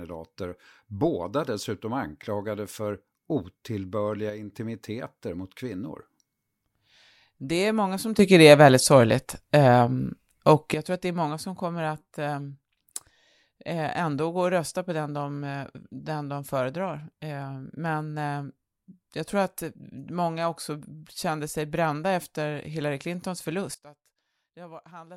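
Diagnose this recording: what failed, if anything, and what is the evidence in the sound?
Sudden gain jumps occur at 4.30–4.49 s (about 6 dB down), 8.19–10.74 s between "är många som" and "jag tror att det" (about 12 dB up), and from 23.74 s onward (about 19 dB down). Speech and background noise shift together, so the waveform envelope steps abruptly and the spectrogram darkens or brightens evenly across all frequencies. The likely cause is a digital gain change applied without a ramp.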